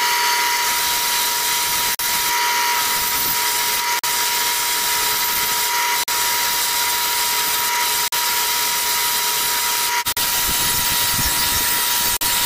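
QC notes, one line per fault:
1.95, 3.99, 6.04, 8.08, 10.12 and 12.17 s, gap between chunks: six abrupt 44 ms holes of silence with hard edges, one every 2.04 s. The sound stops dead and resumes with nothing lost, because silence is inserted at each join between 2 s chunks.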